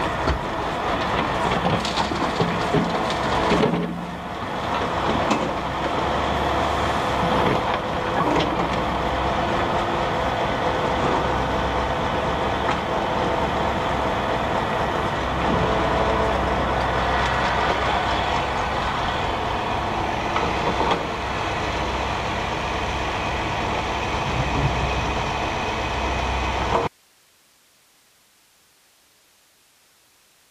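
The audio has an audio dropout to a faint residue starting abruptly at 26.87 s and lasting to the end: the signal vanishes mid-flow and only a low hiss remains, roughly 35 dB below the earlier level. The cause is likely a lost input while the downstream path stayed live. On a waveform the envelope collapses to a thin flat band at that instant. On a spectrogram the structured energy stops dead, leaving faint uniform broadband noise with no fade.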